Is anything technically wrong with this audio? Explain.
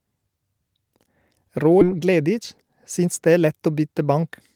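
Yes, there are two faults in this speech.

At 1.81 to 1.83 s there is a skip ahead. Roughly 0.4 s of speech was discarded while later audio sat ready, so playback jumps straight on with no filled gap. Unlike a dropout, there is no silence or concealment, just a sudden join.

From 1.91 to 3.89 s a jitter buffer speed-up follows. Having built up excess delay, the receiver repeatedly trimmed pitch-period-sized slices, about 0.15 s in total, so the speech runs at 108% and sounds hurried. Unlike resampling, the pitch stays unchanged.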